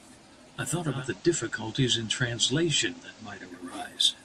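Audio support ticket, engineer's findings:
Digital radio blending to analogue, 0.87 to 3.66 s: receiver drops to the FM copy with about 0.2 s crossfades. Hiss about 25 dB under the speech, level unchanged. Likely the tuner's blend logic on weak digital reception.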